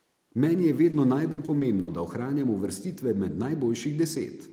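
A brief smear in the speech at 0.91 to 0.95 s, where the sound seems to hang for an instant before blending back, is short concealed packet loss. About 20 ms of audio arrived too late to be decoded, so the receiver bridged the hole by extending the preceding sound and blending back into the real signal. The patch is short enough to pass as a small wobble rather than a clear break. From 1.31 to 1.89 s the speech turns choppy, with pieces audibly missing. This is repeated packet loss: four separate holes totalling about 160 ms, the longest 60 ms, mean that roughly 28% of that stretch is synthesised fill rather than real audio. Each gap is papered over by continuing the last sound, and the next one follows before the voice can settle, producing the choppy, stuttering texture.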